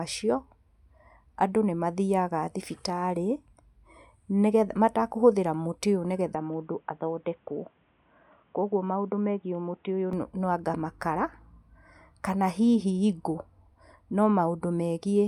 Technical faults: input switched to a poorer device

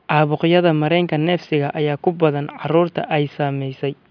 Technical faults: none

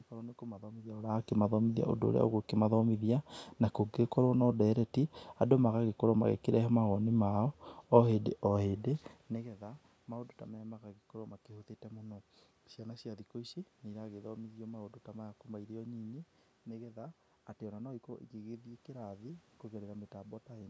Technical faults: none

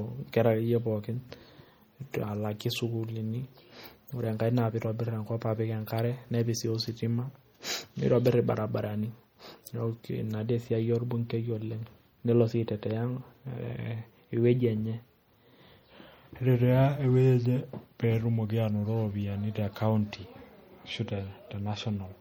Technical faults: MP3 compression

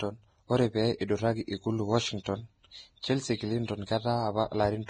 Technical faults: Vorbis compression; pre-echo

